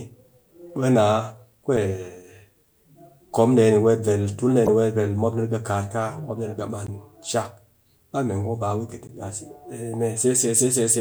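At 1.77 s, at 4.66 to 4.69 s (between "weet ver tul ɗee" and "ni weet ver mopni"), at 6.87 to 6.89 s (just before "kushak ba mee") and at 9.07 to 9.10 s, the speech is broken by damaged data in a compressed stream. At each point, corrupted bytes make the decoder misread frames and lose sync until it finds a valid header, producing a brief glitch. A clean dropout would leave silence or a smoothed gap instead.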